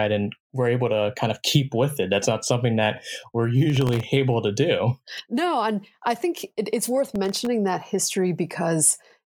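Processor overload crackle at 3.70–4.03 s after "not something that we're" and 7.16–7.47 s before "that history": many sub-millisecond buffers missed as silence, heard as gritty tearing.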